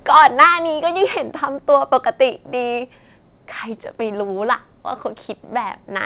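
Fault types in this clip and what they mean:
Microphone overload: From 0.11 to 0.46 s the loudest speech peaks are flattened, giving a harsh, crackling edge. The likely cause is an input level about 6 dB too high, driving peaks past the converter's limit. A small share of samples is cut off.
Microphone volume stepped down: At 0.18 s and again at 1.17 s, speech and background both drop abruptly by about 3 dB. This is likely the call software reacting to the hot input by lowering the microphone level one step each time.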